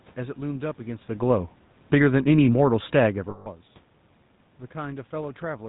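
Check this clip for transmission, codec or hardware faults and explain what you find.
Yes, there are transmission faults: GSM full-rate coding across the whole speech clip, two automatic gain swings around 2 s, and a burst of lost GSM frames just after 3.3 s.

GSM full-rate codec damage runs throughout. The speech is rebuilt from a vocal-tract model driven by a regular pulse excitation that keeps only a third of its samples, consistent with the 13 kbps full-rate coder. The result sounds plainly buzzy and gravelly, and a spectrogram shows a hard ceiling at 4 kHz.

Automatic gain falling occurs from 1.78 to 2.17 s. The gain control judged the input too loud, or its background noise too strong, and pulled its gain down by about 6 dB. Voice and background sink together, unlike the talker's own movement near 1 s. On the waveform, the envelope tapers smoothly over those 0.39 s.

Automatic gain rising follows from 2.11 to 3.0 s, just after the input level dropped by about 19 dB. 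The control slowly raised its gain by about 3 dB, so the speech and room noise swell together. The waveform shows a gradual ramp, and the noise floor on the spectrogram lifts with it.

Lost GSM frames occur from 3.3 to 3.48 s. For about 160 ms, which fits roughly eight 20 ms frames, the decoder repeated the last good frame's settings. This produces a rough, metallic ringing. A spectrogram shows a frozen, smeared band pattern.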